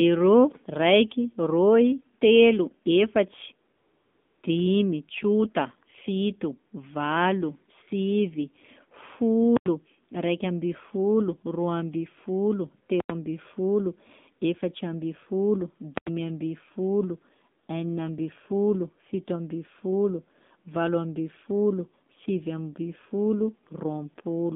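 Throughout, the speech carries AMR narrowband mobile codec damage, and it is plainly audible. The sound is squeezed into a telephone band from 200 Hz to 3.7 kHz, and the vocal-tract model, fed by only a few pulses per subframe, gives voiced sounds a buzzy, synthetic edge. The degree of coarseness fits a low AMR-NB mode around 7.4 kbps. On a spectrogram, energy stops abruptly at 3.7 kHz and thins below 200 Hz, and harmonics look smeared in 20 ms steps.

From 3.76 to 4.42 s, AMR comfort noise replaces the real signal for 660 ms. The phone judged the talker silent and stopped sending speech frames, so the receiver generated smooth, steady noise from a rough description of the background. It is heard as a flat hiss that switches in and switches off again, with any natural background detail gone. A spectrogram shows an even, featureless band with hard edges at both ends. The waveform shows a uniform noise floor.

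At 15.98 to 16.07 s, invalid numbers at full scale appear. A calculation produced infinite or invalid values that were clamped to the maximum, pinning the output at one extreme value for about 93 ms, which fits a 4096-sample block. It is heard as a loud pop at the start and end with nothing between. On the waveform, a flat bar sits far from zero, beyond the speech peaks. On a spectrogram, bright broadband vertical lines mark each edge.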